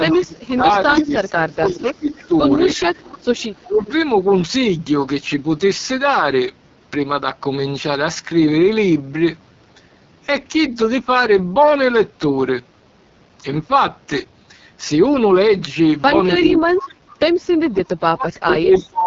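The whole clip runs through the AMR wideband (HD Voice) codec at 6.6 kbit/s, its lowest rate. Nothing sounds above about 7.4 kHz, and the speech is rough and raspy throughout.

From 0.00 to 2.81 s, speech is suppressed in double talk. The level dips by up to about 20 dB for roughly two seconds, likely because the echo canceller ducked both talkers at once.

An echo leak overlaps this, at 0.11 to 0.15 s and again from 0.72 to 3.92 s. A faint copy of the speech returns 315 ms late, about 15 then 20 dB down. Likely cause: the far side's echo canceller missed part of its loudspeaker pickup.

From 3.66 to 3.92 s, suppression in double talk briefly cuts the speech by about 10 dB.

From 16.38 s to the end, it returns more deeply, with drops near 30 dB over roughly two seconds.

Inside that stretch, from 18.72 to 18.90 s, the echo leak comes back at 315 ms delay, only about 10 dB below the speech.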